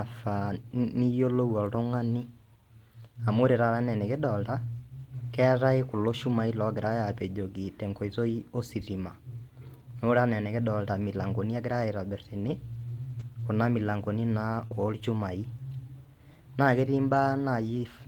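Around 1.01 s, 7.15 s and 8.29 s you get three brief rough patches, each about 20 ms long. Each is a lost packet rebuilt from error correction: the packet went missing, but the next one carried a low-bitrate backup copy, so the decoder played that and there's no gap. The cost is a coarser, noisier texture for that moment. The same thing happens over longer stretches at 12.39 to 12.49 s (about 60 ms, which points to three packets in a row) and at 17.10 to 17.16 s (about 40 ms, likely two packets).

Between 14.67 and 14.74 s there's a short concealed packet loss. About 40 ms of audio never made it in time, and the receiver bridged the hole by carrying the last sound forward before blending back into the real signal. That leaves a small smear or wobble. The patched section also runs a touch longer than what it replaced, adding roughly 10 ms. In the middle of it, around 14.71 s, a single 20 ms packet was recovered from its backup copy, so that bit has the same rougher texture as the others.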